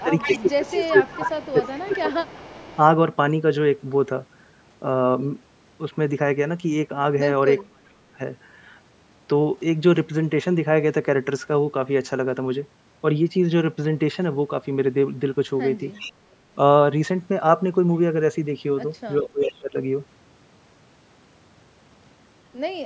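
From 0.0 to 2.77 s an echo leak is audible: a second copy of the speech trails the original by a fixed 392 ms, roughly 10 dB down. The likely cause is a far-end speakerphone whose echo canceller let part of its microphone pickup through and sent it back. The constant 392 ms gap sets it apart from room reverberation, which smears continuously instead of repeating as a distinct late copy.

Over the same opening, from 0.03 to 2.11 s and again from 2.56 to 2.73 s, the main speech dips by up to about 20 dB. This is speech suppressed in double talk, likely caused by the echo canceller turning down everything it could not separate while both sides overlapped. Unlike a packet dropout, it follows the overlap.

The same suppression returns at 7.69 to 8.2 s, cutting deeper, near 35 dB, so the speech almost vanishes for about 0.4 s. A short echo leak sits at 15.94 to 16.12 s, again 392 ms late and around 15 dB down. 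At 19.2 to 19.76 s the speech is pushed down by about 20 dB, and within that span, from 19.26 to 19.59 s, a faint echo about 20 dB down comes through at the same delay. Above 8 kHz the band is empty throughout, from the call's own processing.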